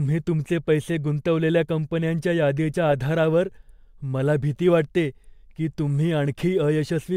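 Sample clock jitter runs from 3.11 s to the end of the speech. The converter's clock wanders by a microsecond or two, so samples land early or late, leaving a faint hiss, some 45 dB below the signal, that thickens on loud, bright sounds and clears in pauses.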